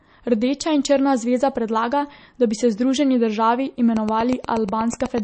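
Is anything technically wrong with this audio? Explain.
Yes, two things. The whole clip has MP3 compression damage that's plainly audible: nothing above 8.3 kHz, watery swirl, and smeared attacks, which fits a low bitrate around 32 kbps. Then from 3.97 to 5.19 s, right after "bi se združeni državi", there's a train of clicks: around ten evenly spaced ticks at about 8.2 per second, poking roughly 10 dB above the speech, likely interference or a faulty connection.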